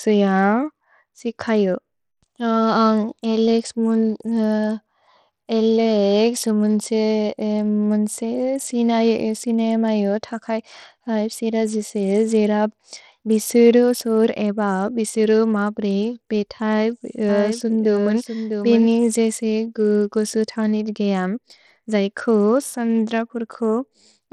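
Bluetooth SBC compression runs throughout the speech, from start to finish, and is plainly audible. This is likely the Bluetooth SBC codec working at a starved bit pool, which fits a bitrate near 80 kbps. With so few bits shared across its wide sub-bands, the upper bands are cut off, leaving nothing above 18.2 kHz. The remaining bands are coarsely quantised, adding a gritty noise and aliasing to the sound.

A doubled audio track appears from 17.29 to 18.87 s, just before "जेसे गुसु तौनित् गेअम्". A second full-band copy of the speech trails the original by roughly 0.7 s at a level a few decibels lower. The cause is likely a slower second capture path mixed in with the first. The copy has no reverberant tail or room colouring, and it cuts in and out abruptly at both ends.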